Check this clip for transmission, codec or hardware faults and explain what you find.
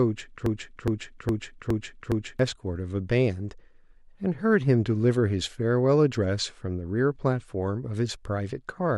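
One fault is present: a broken-record loop. From 0.46 s to 2.39 s, a fragment of speech about 0.41 s long plays five times in a row. Each repeat is identical, with no gap between them. The likely cause is a stall in the player, encoder or stream, which kept sending out the last piece of audio it held. The speech that belonged in that span is lost. It sounds like a stuck, stuttering skip that ends at 2.39 s.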